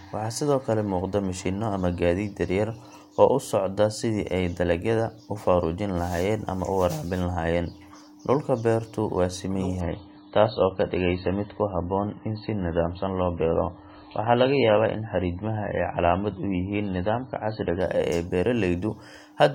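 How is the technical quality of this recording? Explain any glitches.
The recording has one clear glitch: an adaptive stream at a lower bitrate kicks in from 9.8 s to 17.8 s. The speech suddenly loses its top end, with nothing above about 4.6 kHz, and picks up that swirly codec texture, with no gap at either switch. That points to the player dropping from a decent MP3 stream, around 128 kbit/s, to something near 16 kbit/s when the connection sagged, then stepping back up.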